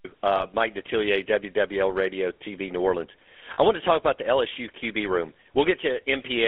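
Speech heard through the GSM full-rate codec, with two brief losses of GSM frames. Throughout, the band is confined to roughly 300 Hz to 3.4 kHz, and the voice carries a plainly audible buzzy, gravelly roughness, which fits 13 kbps full-rate coding. The codec rebuilds the voice from a vocal-tract model driven by sparse, regularly spaced pulses. That pulse excitation is what makes it grainy and rasping rather than merely muffled, which sets it apart from a simple narrowband telephone filter. At 0.36 to 0.46 s, and again at 3.54 to 3.58 s just before "I want to talk", the sound freezes into a short metallic ring, consistent with one lost frame and then two. The decoder stands in for each missing frame by repeating the last good frame's settings. That held, tonal smear distinguishes it from a packet-loss gap, which drops to silence or clicks.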